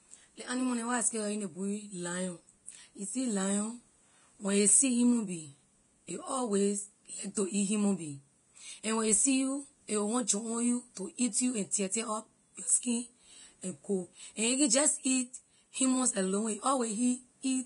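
From start to finish the speech sounds hissy and grainy, with roughened tones, blurred consonant attacks and nothing above about 10.6 kHz. The damage is heavy. The likely cause is Vorbis compression at a low setting, which fits a bitrate around 30 kbps. The encoder cut the top band away entirely and quantised the remaining treble so coarsely that its fine detail turned into noise of similar energy.

Pre-echo occurs three times. From 7.34 to 7.37 s, a short hiss of about 23 ms runs just ahead of "to eat human being". At 10.27 s, a 17 ms hiss falls between "you a will want" and "jump on you to". At 11.71 s, an 18 ms hiss follows "to eat you and". In each case a sharp attack sits late in a transform block, so the codec noise sized for the loud onset spreads back into the quiet moment before it, softening and smearing the attack.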